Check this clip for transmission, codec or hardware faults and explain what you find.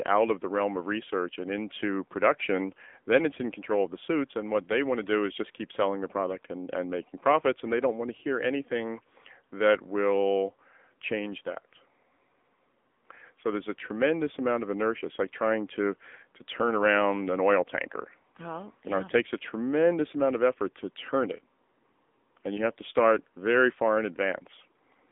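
The speech has passed through the AMR narrowband mobile codec for its whole length. Nothing reaches above about 3.7 kHz, and the line band sits at roughly 250 Hz to 3.6 kHz, giving the thin, boxy telephone sound. The codec models the vocal tract and drives it with a sparse pulse excitation in 20 ms frames. Here the damage is plainly audible: a buzzy, synthetic edge to voiced sounds, which fits a low mode around 7.95 kbps.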